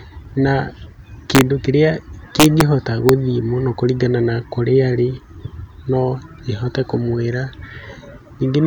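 At 1.35 to 1.41 s the speech hits integer overflow: the loudest peaks push about 1 dB past the integer ceiling and, instead of being held there, wrap round to the opposite sign, so you get a hard crack rather than soft clipping. It's worse from 2.40 to 2.61 s, at about 2 dB over, with a longer run of snapping. There's one more tiny crack at 3.09 s, right at the limit, just before "mũno kũringana na kũrĩa".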